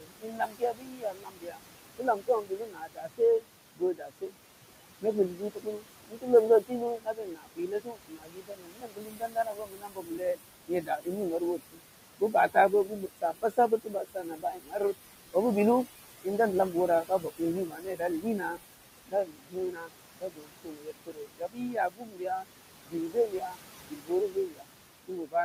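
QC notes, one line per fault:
Throughout: noise suppressor artifacts. The steady background is pulled down by about 21 dB between phrases and lets more through under the talking, so the residue pumps. A spectrogram shows a dark noise floor in gaps, with a brighter, mottled haze beneath speech energy.
0.0–4.35 s, 5.01–15.35 s, 16.24–25.35 s: speech cut by the noise suppressor. Soft consonants and quiet endings are mistaken for noise and ducked by up to about 22 dB, roughly three seconds in the first span and about five in each of the others, leaving syllables swallowed. The waveform shows clipped-off tails; the spectrogram shows missing high-frequency fricative streaks.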